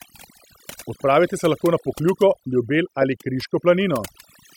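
From start to finish the speech carries overdone noise removal: a noise reducer set far too hard cut individual frequency bands whenever they sat near its noise estimate, taking quieter speech detail with them. Gaps fall to near silence flecked with twinkling specks. A spectrogram shows scattered isolated dots in the pauses and ragged, hollowed-out harmonics.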